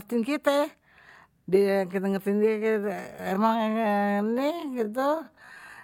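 From 2.46 s to the end, the speech slows abruptly to about 0.55 times its pace while the pitch stays put. This is a time-stretched section. Software likely lengthened it by repeating short pieces of audio. The result drags.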